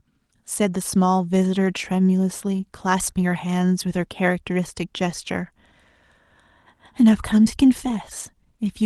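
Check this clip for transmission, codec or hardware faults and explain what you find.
No transmission, codec or hardware faults are audible here.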